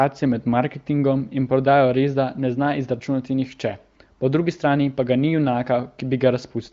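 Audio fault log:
No faults are heard anywhere in the speech. It carries the sound of an AMR wideband (HD Voice) codec at what seems a high rate, with nothing above about 7.6 kHz.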